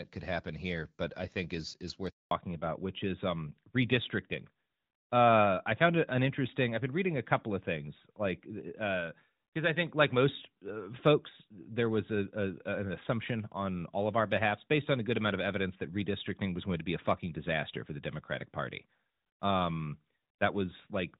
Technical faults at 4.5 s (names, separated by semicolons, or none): fallback to narrowband